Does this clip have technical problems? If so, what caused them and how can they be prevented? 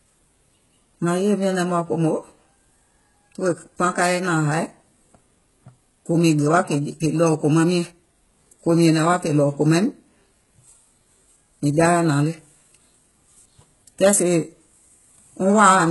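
Yes. Throughout the speech the s sounds come out gritty and lispy, and nothing is present above 11.5 kHz. This is likely HE-AAC compression, which rebuilds the treble from copied lower bands. The heavy damage fits a bitrate near 12 kbps. Encoding at a higher bitrate, or with a codec that carries the full spectrum, would prevent it.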